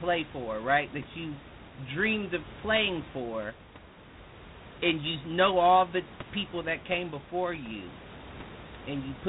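Throughout the speech, G.726 ADPCM coding is plainly audible. Each sample carries only a few bits of difference from an adaptive prediction, which fits the 24 kbit/s rate, so a rasping hiss rises and falls with the speech level. Nothing passes above 3.9 kHz. Room noise sits about 18 dB below the speech.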